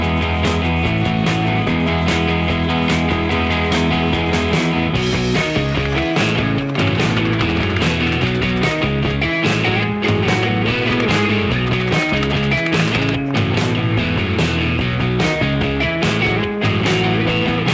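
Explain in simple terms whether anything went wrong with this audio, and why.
Nothing went wrong with this audio. It has been through an ordinary call's microphone processing and call codec, which leave it with nothing above 8 kHz, so it sounds like a normal call.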